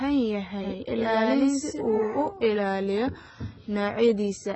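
Across the whole speech clip there is heavy AAC compression damage, likely from AAC-LC at a very low bitrate, consistent with roughly 16 kbps. Nothing is present above 8.1 kHz, and the remaining band sounds dull, smeared and fizzy rather than simply cleanly filtered.

From 0.64 s to 2.28 s a doubled audio track appears, likely a second copy mixed in out of step. It trails by about a tenth of a second at nearly equal level. Unlike an echo or reverb, it has no decay or room colour and starts and stops abruptly.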